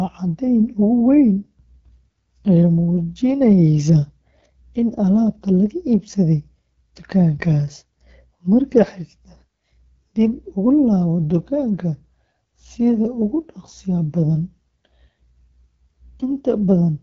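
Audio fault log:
throughout, AMR wideband (HD Voice) codec: The speech carries a plainly audible rough, raspy grain, and nothing is heard above 7.5 kHz. AMR-WB models the voice below 6.4 kHz as a pulse-driven vocal tract and fills the top band with shaped noise. At its lowest modes the excitation is coded too coarsely to follow the voice faithfully, leaving this harshness. The degree of roughness fits a rate of about 8.85 kbit/s.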